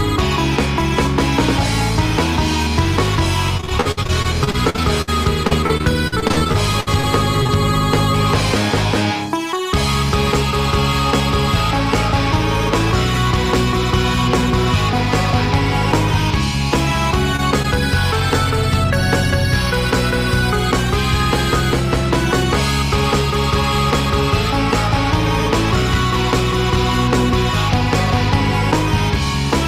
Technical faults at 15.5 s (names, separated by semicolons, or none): none